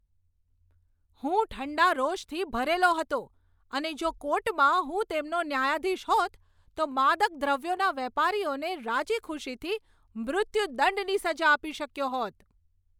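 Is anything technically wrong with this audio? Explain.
No, nothing technically wrong can be heard in this recording. The speech comes through steadily, with no dropouts, clicks or distortion to point to.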